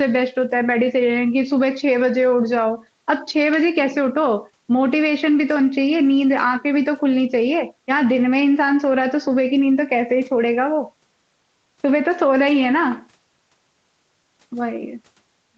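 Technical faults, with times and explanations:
Nothing stood out on listening to this speech clip.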